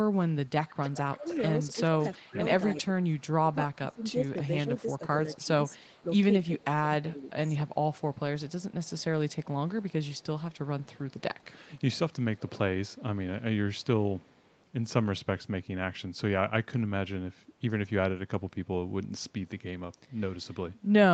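A speech recording from a call, with an echo leak running through its first half. A copy of the talker trails about 309 ms behind, which is likely the far end's loudspeaker getting past its echo canceller. It's strongest from 0.68 to 2.82 s, at about 15 dB under the speech, then weaker from 4.04 to 6.04 s (about 30 dB down) and 7.68 to 12.5 s (about 35 dB down).

Overlapping that, there's speech suppressed in double talk: between 1.14 and 7.46 s the voice dips and thins in patches adding up to around two seconds, sinking by as much as about 20 dB. That's most likely the echo canceller ducking everything while both sides talked at once. Shorter bites of the same happen at 11.38 to 11.44 s (about 15 dB) and 20.36 to 20.74 s (about 10 dB). The band stops at 8 kHz, as expected for this Opus call path.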